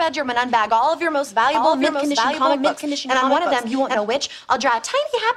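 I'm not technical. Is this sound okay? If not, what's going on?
No. From about 1.55 to 3.95 seconds there is a doubled audio track. The same sound plays twice, with a second copy trailing roughly seven tenths of a second behind. The copy is about as loud as the original and sounds just as clear. It is not an echo from a room. It starts and stops suddenly. This likely happened because the sound was captured twice, once through a slower route, or because an edit left two copies out of step.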